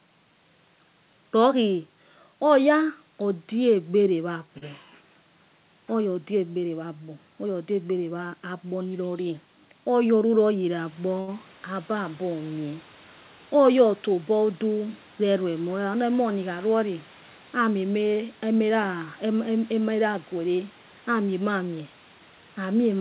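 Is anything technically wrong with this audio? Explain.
Yes. Two jitter buffer problems occur, each twice.

Short stalls from a late packet at 4.58 to 4.64 s and 11.20 to 11.30 s: the buffer ran dry, so the last sound is held for 36 ms and 74 ms with a faint buzz or dip. Nothing is skipped, unlike a dropout.

Jitter buffer speed-ups at 9.58 to 9.91 s and 18.41 to 18.99 s: pitch-period pieces totalling about 40 ms and 50 ms are trimmed, so the speech hurries to 110% and 109% at unchanged pitch, unlike a resampling fault that shifts pitch.

The room noise stepping up around 11.0 s, and the cut-off near 4 kHz, which fits a G.711 call codec, are not faults.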